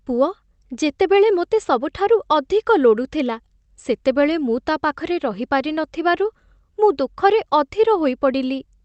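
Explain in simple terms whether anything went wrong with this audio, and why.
Nothing went wrong that a listener would notice: this speech came through an ordinary internet call connection, which trims off the very highest frequencies above about 8 kHz, and nothing else stood out on listening.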